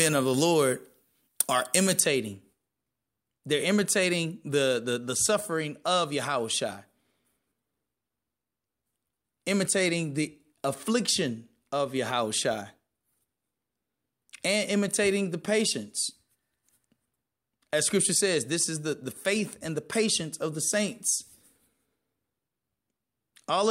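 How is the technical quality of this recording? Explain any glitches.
The opening two seconds have a clear tonal fault: pre-emphasis left on.

From 0.0 to 2.0 s the treble is lifted by a 75 µs FM-style pre-emphasis curve, and the matching de-emphasis on playback never happened. The boost starts rising above roughly 2 kHz and reaches about 13 dB at 10 kHz relative to 1 kHz, so the sound comes across thin, glassy and hissy, with exaggerated sibilance. Unlike a high-pass filter, the low end is still there. Instead, the top octaves climb steadily.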